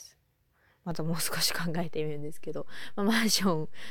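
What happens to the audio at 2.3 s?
At 2.3 s you're inside a DC step that began with a low thump at 0.91 s: the zero line shifted by about -33 dBFS and stays offset to the end, while the speech carries on unchanged.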